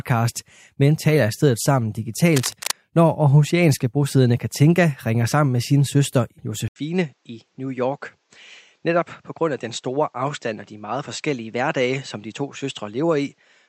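From 2.36 to 2.71 s, a burst of dense, uneven crackle sits over the speech, about 10 dB below it. This is cable scratch noise. It likely comes from a worn cable or connector being moved, its contact resistance jumping rapidly.

At 6.68 s the input switched to a poorer device. There is an 80 ms gap first. Then the speech runs to the end about 5 dB quieter and duller, with nothing above 8 kHz. A new noise floor appears, about 45 dB down. A likely cause is a change to another microphone or a headset's call profile.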